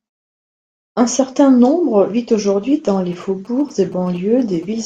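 From 3.13 to 4.65 s, GSM signalling bursts break in. A nearby phone's radio pulses are rectified, giving a galloping dit-dit-dit of short 217 Hz buzzes well below the speech.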